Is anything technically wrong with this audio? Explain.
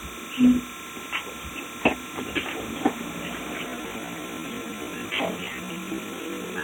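Yes, there are two problems.

Timecode bleed runs through the whole clip. Linear timecode from an adjacent track or cable has leaked into the audio, at about 30 dB below the wanted sound. The code is a square wave that flips between tones near 1 kHz and 2 kHz, clocked at 30 frames per second, so it sounds like a thin, steady chirping warble behind everything. A spectrogram shows two persistent horizontal bands at 1 kHz and 2 kHz with their odd harmonics, and the waveform carries a faint fuzz in the gaps.

From 3.64 s to the end, the pace drops abruptly to 0.53 times normal speed while the pitch holds. This is likely a time-stretched section, where software lengthened that stretch to fit a duration by repeating short fragments to preserve pitch. At that rate the audio drags. On a waveform, onsets after 3.64 s are spaced roughly twice as far apart, and a spectrogram shows events stretched out in time with unchanged frequencies.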